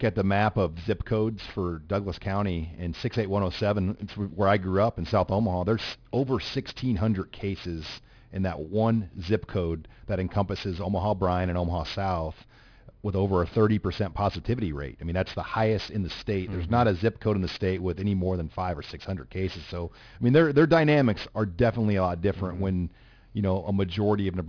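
Aliasing runs through the whole speech clip, which points to a drop to an 11 kHz rate without an anti-alias filter. Energy above 5.5 kHz folds back down, roughly 20 dB under the signal, making sibilants gritty and metallic. A spectrogram shows content packed hard against 5.5 kHz, with mirrored, unrelated traces.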